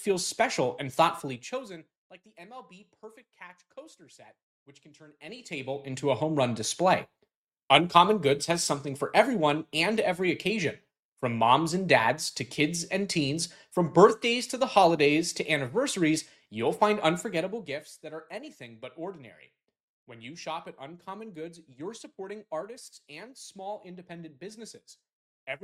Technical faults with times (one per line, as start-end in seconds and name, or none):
1.18-1.98 zipper noise
5.10-5.96 zipper noise
17.20-17.92 zipper noise